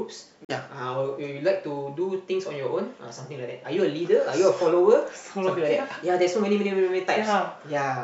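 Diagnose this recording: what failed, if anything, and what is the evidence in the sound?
The failure is most likely a Bluetooth dropout on the wireless playback link. The speech cuts to silence from 0.45 to 0.50 s, a hole of about 43 ms, consistent with two lost frames. When it returns, the speech has moved on as though it had played through the gap.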